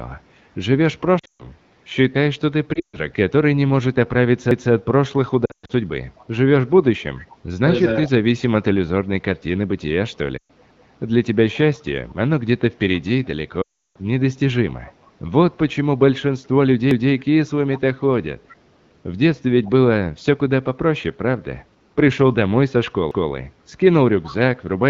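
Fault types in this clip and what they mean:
lost AMR speech frames: The sound smears and fades into short gaps at 1.19 to 1.47 s, 2.73 to 3.00 s, 5.45 to 5.72 s, 10.37 to 10.51 s and 13.61 to 13.97 s, the last being the longest at 340 ms of missing audio. Frames corrupted on the radio link were discarded, and the AMR-WB decoder filled each hole by repeating its last good settings at falling gain, which fades quickly in wideband.
overlapping chunks: A 200 ms stretch of sound plays twice, heard as a click or stutter at the join, at 4.51, 10.71, 16.91 and 23.11 s. The steady 6-second spacing shows the audio was handled in 6-second chunks, and each new chunk began 200 ms before the previous one had finished, so that overlap was played a second time.
echo leak: A faint delayed copy of the sound appears from 7.19 to 7.35 s. It trails the original by 422 ms and sits around 25 dB below it. The likely cause is a far end on loudspeaker whose echo canceller failed to remove everything its microphone picked up, so part of the call was sent back.
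speech suppressed in double talk: Between 7.91 and 8.13 s the speech briefly sags in level, a modest dip of around 5 dB adding up to roughly a tenth of a second, just after the echo fragment. This is likely the echo canceller losing track while both sides were active at once. Unable to separate the local talker from the loudspeaker echo, it turned everything down together.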